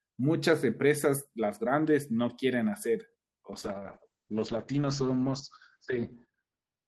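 At 3.52 s there's a call bitrate drop: the bandwidth estimate fell and the encoder got squeezed, with the sound pointing to a fall from roughly 32 kbps to around 8 kbps. The speech turns coarse, and the top end gets lopped off as the audio bandwidth shrinks from 20 kHz to 8 kHz, so it goes muffled. It sits at that worst level for about 2.75 s and never recovers before the clip ends.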